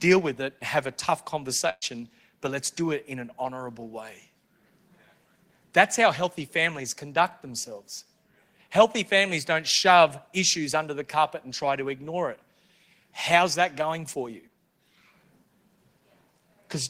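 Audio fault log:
1.69–1.85 s, burst of packet loss: after "it have a tough", about 120 ms of concealment stretches the last sound and fades it, then 30 ms of silence before "but let's do it". On a spectrogram, the smeared repeated last sound dims to a blank gap.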